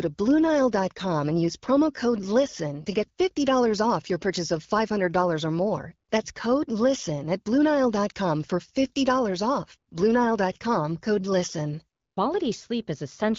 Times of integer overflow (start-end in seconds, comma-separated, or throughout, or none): none